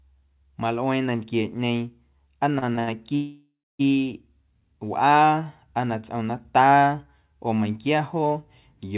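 Repeated stalls (stutter) run from 2.56 to 2.89 s in this speech recording: the sound catches four times, with about 132 ms of stretched, continued audio packed into that third of a second, roughly 40 percent of the span, the longest hold 78 ms. Packets were arriving late or too slowly, so the jitter buffer kept running dry and the receiver extended the last sound each time. Nothing is lost, but the delivery drags and stutters.

A call audio freeze follows from 3.15 to 3.81 s: the sound hangs as a fading buzz or hiss for about 640 ms, the last 250 ms of it silent, then resumes exactly where it stopped, so the rest of the audio arrives 640 ms later than it should. The likely cause is packets held up in transit, leaving the jitter buffer empty while the receiver filled the wait. The whole clip is cut off above 4 kHz, which fits a narrowband call codec such as G.711.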